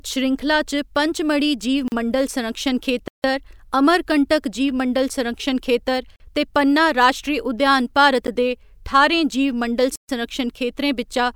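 Speech with five blocks of digital silence, where the signal drops straight to silence and back with no fade: short holes at 1.88–1.92 s and 6.16–6.20 s, a tick at 8.27 s, and longer dropouts at 3.08–3.24 s and 9.96–10.09 s.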